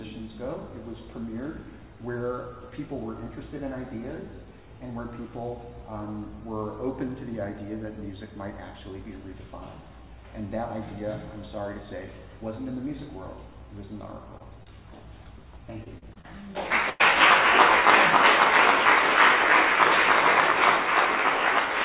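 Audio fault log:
14.38–14.41 and 14.63–14.68 s, short concealed packet loss. Two brief holes appear, each about 20 ms of audio that arrived too late to play. The receiver patched each one by extending the sound just before it. It then crossfaded back into the real signal. The result is a quick smear or wobble rather than a gap. Any very short sound falling in those holes can drop out. The band stops near 4 kHz here, which fits a narrowband G.711-style call path.
15.84–16.26 s, repeated packet loss (robotic sound). Four separate losses land inside this 0.42 s stretch, totalling about 100 ms. The longest is 36 ms. About a quarter of the span is patched rather than real. Each patch copies the preceding sound, and the next loss arrives before the audio settles. The stretch therefore sounds choppy, with small pieces missing.
16.90–17.02 s, burst of packet loss. About 100 ms is lost in one block. 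The receiver keeps extending the last sound across the whole gap and lowers its level as the gap goes on. A voiced sound turns into a held buzz, and anything else becomes a fading hiss. There is no outright silence. Playback then resumes further along, and the audio from inside the gap is simply gone.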